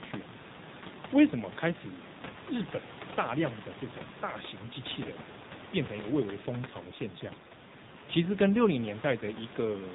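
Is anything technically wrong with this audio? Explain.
Yes. Throughout the speech the voice sounds muffled, buzzy and synthetic, with nothing audible above 4 kHz, and the room noise, sitting about 16 dB below the speech, turns into a swirling warble. This is the AMR narrowband mobile codec at work. It samples at 8 kHz and rebuilds the voice from a vocal-tract model excited by a few pulses per 5 ms subframe. The plainly audible damage fits a low mode of about 7.4 kbps.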